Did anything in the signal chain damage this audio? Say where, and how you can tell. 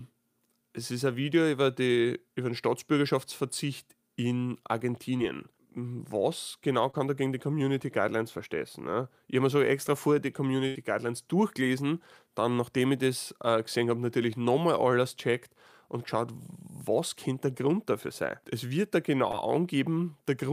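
Yes, the network leg of the call dropped audio in four places. Three are short concealed packet losses: at 5.17 to 5.21 s, just before "was genau"; at 6.91 to 6.95 s, between "was genau" and "da gegen die"; and at 19.31 to 19.35 s. Each is a quick smear or wobble. About 20 ms of the real signal never arrived in time, and the decoder covered it with roughly 16 to 22 ms of extrapolated sound before blending back in.

The bigger hit is a burst of packet loss at 10.67 to 10.77 s, right after "so extra vorher die". Here about 80 ms went missing in a row, so the receiver had to keep continuing the last sound for the same 80 ms while turning it down. You hear a held, fading tail, and when the audio picks up again, whatever should have sat in that gap is simply gone.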